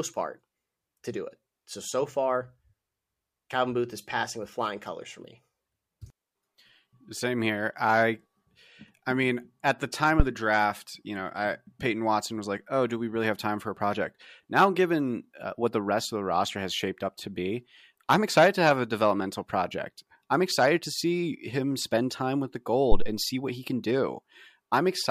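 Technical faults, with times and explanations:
10.20 to 10.25 s and 22.92 to 23.12 s, phantom power thump: two deep, low thuds peaking at about -5 dBFS and about -7 dBFS, dying away over 12 ms and 46 ms, as a supply switched on or off on a live input pushes a sudden voltage step through the coupling capacitors.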